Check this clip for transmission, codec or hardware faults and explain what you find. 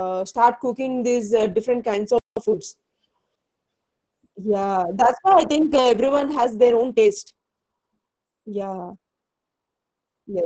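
Yes, there are four faults: codec damage throughout, and a dropout, a rushed patch and a pace change at specific points.

Opus voice compression runs through the whole clip. The speech sounds muffled, hoarse and a little robotic, with nothing above about 8 kHz. Opus in its SILK mode models the voice with linear prediction and codes the excitation signal very coarsely when data is scarce. The heavy damage here points to a rate of around 10 kbps.

A playback stall cuts the audio to silence from 2.18 s to 2.37 s, a gap of 184 ms in mid-flow. The likely cause is that the player ran out of buffered data, or its output thread was blocked, and nothing was sent to the speaker until it recovered.

Time-compressed catch-up follows from 2.37 s to 2.55 s. The speech is hurried at double speed with normal pitch. To clear the backlog left by the stall, the player cuts out short slices and cross-fades the remaining pieces together, which shortens the audio without raising its pitch.

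A time-stretched section runs from 6.32 s to the end. The pace jumps abruptly to about 1.52 times normal while the pitch stays put, so the speech sounds rushed. The likely cause is software squeezing the audio to fit a shorter length and dropping short repeated segments to keep the pitch unchanged.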